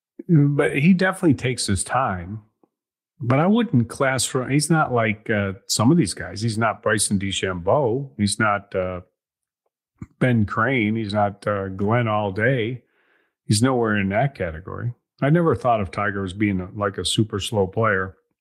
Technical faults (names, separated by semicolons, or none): none